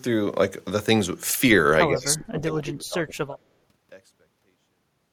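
A speech clip. From 1.87 to 3.5 s the voice dips and breaks up in pieces, dropping by roughly 25 dB at its deepest. This is speech suppressed in double talk. An echo canceller likely mistook overlapping talk for echo and attenuated it. A smooth fade-out runs to the end.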